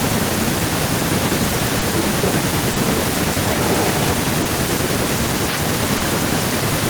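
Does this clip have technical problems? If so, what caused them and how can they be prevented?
Yes. Four kinds of fault are audible in this speech clip.

Clock drift between sender and receiver runs through the whole clip. The sender's clock runs slow, by roughly 2 percent, so the receiver's jitter buffer keeps draining and has to pad the audio. The result is small timing hiccups at uneven intervals from start to finish, with the sound briefly held or nudged rather than flowing evenly. Prevention: use adaptive playout with drift compensation, such as resampling against the sender's rate, so the buffer level stays steady.

A short stall from a late packet occurs four times: 1.79 to 1.83 s, 2.73 to 2.78 s, 4.42 to 4.47 s, and 5.97 to 6.02 s. Each time the buffer ran empty, and the receiver stretched the last sound, by 20 ms in the first stall and 30 ms in the others, before resuming at the same point. 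Nothing is lost, but the sound hangs with a slight buzz or dip, and the playout delay grows by the same amount. Prevention: give the jitter buffer enough headroom and use time-scale modification to absorb late arrivals smoothly.

Speech suppressed in double talk shows up between 1.95 and 2.44 s. The voice dips by up to about 10 dB in pieces, around 150 ms in total. The likely cause is an echo canceller that could not tell the near talker from loudspeaker echo while both sides spoke, so it attenuated everything. Prevention: use an echo canceller with reliable double-talk detection that adapts its filter without heavy suppression.

Echo leak is heard from 3.44 to 4.15 s. A copy of the voice returns about 135 ms late, roughly 5 dB below the direct speech. This points to a loudspeaker on one end whose echo canceller likely failed to remove all of the acoustic pickup. Prevention: use headsets, or make sure the far-end canceller has a long enough tail and correct reference alignment.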